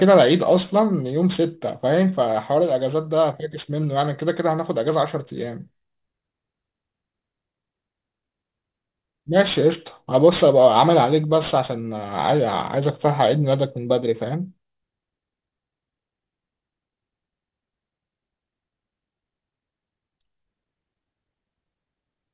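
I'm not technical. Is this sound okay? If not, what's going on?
No. Aliasing runs through the whole clip, from start to finish. The speech was squeezed down to a much lower sample rate, which fits a rate of about 8 kHz, without first removing the high frequencies. Anything above about 4 kHz could not fit, so it folded back down as false, unrelated tones. You hear this as a gritty, metallic edge on s and sh sounds, quieter than the speech itself.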